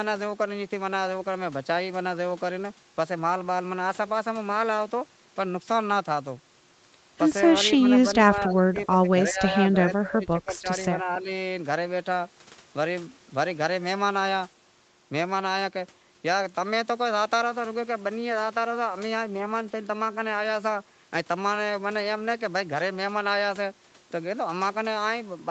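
Between 8.35 and 11.27 s the speech dips four times (8.35–9.08, 9.30–9.58, 9.95–10.67, 11.02–11.27 s), deepest near 25 dB at first, then shallower. This is likely speech suppressed in double talk: level pumps down rather than breaking into packet-loss gaps.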